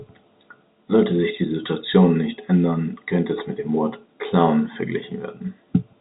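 No technical faults detected.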